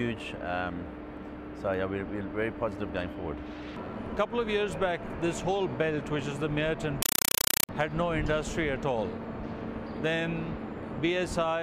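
From 7.02 to 7.69 s the sound gives way to very loud, chattering static: 5.33 ms noise bursts repeating 31.25 times a second. This is a compressed stream played as audio. Dolby Digital (AC-3) frames are being treated as ordinary samples instead of decoded, each burst followed by zero padding.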